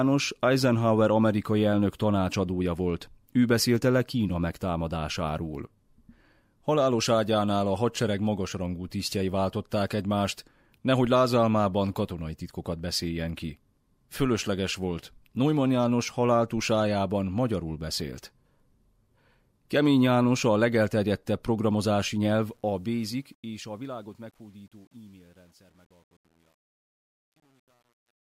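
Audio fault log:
22.29–28.22 s truncation distortion on a fade. The fade-out turns gritty, worst from 23.72 s. This fits an undithered 9-bit stage.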